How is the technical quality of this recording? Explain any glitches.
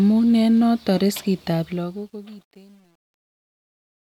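The recording has one clear fault, on the fade-out at its end.

From 1.62 s, just after "eng' noton riskit", there is truncation distortion on a fade. The fade-out, running from around 1.6 s to 4.05 s, is rendered without dither at a coarse resolution, consistent with about 9 bits. As the speech level drops, the waveform collapses into a few square steps. From 2.19 s to 4.05 s the tail turns gritty.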